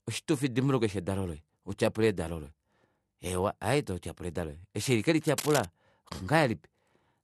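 From start to finish the speech has the dull quality of low-bitrate audio saved at a high bitrate. On a spectrogram everything stops at a hard shelf near 12.9 kHz, with smeared, blotchy detail below it. The current MP3 has room for far more, so the band limit and smearing were likely baked in by an earlier low-rate encode, which fits something like AAC at 48 kbit/s. Re-encoding at a higher rate could not bring back what that pass discarded.

Just after "twatyapula edalo lange eshi", from 5.27 to 5.66 s, a burst of scratching and rustling sits over the speech at about 10 dB below it. This is cable scratch noise, likely from a worn cable or connector being moved, so its contact resistance jumped about rapidly. The waveform shows dense, irregular spikes riding on the signal for those four-tenths of a second. The spectrogram shows a ragged broadband smear of vertical streaks.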